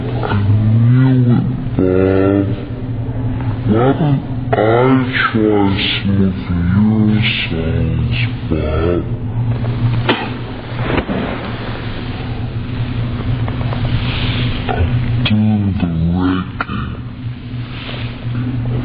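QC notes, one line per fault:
Throughout, wrong sample rate: material captured at 48 kHz is played back at 24 kHz without conversion, so everything runs at half speed and drops a full octave, sounding low and slow.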